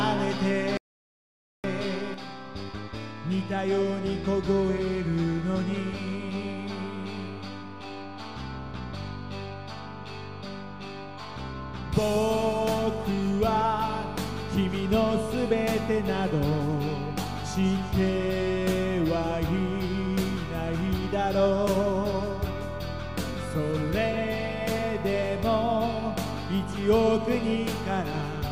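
The audio cuts out completely from 0.77 to 1.64 s, losing about 0.87 s of sound to an audio dropout to silence with no room tone underneath. On a waveform this is a flat line, and on a spectrogram a blank vertical band. The likely cause is a lost input, such as a disconnected device, failed link or stray mute, while recording continued. From 2.14 s to the end, the overall level drops abruptly by about 6 dB with no other change in character. This points to one channel dropping out, likely leaving a mono sum of two identical channels at half amplitude. The waveform envelope visibly shrinks to half its height at that instant, and the spectrogram turns uniformly dimmer across all frequencies.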